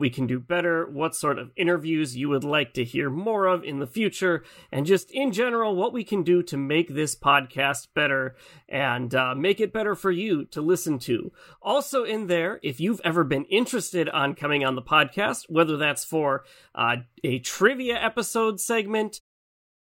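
No technical faults are audible.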